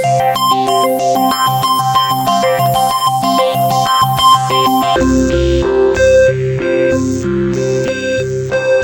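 From 4.96 s to the end, the audio drops to half speed and a full octave lower. That's stereo read as mono: the left and right samples get interleaved into one channel, so everything stretches to 0.5x speed and sits 12 semitones down.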